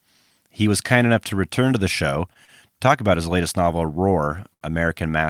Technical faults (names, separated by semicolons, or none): short stall from a late packet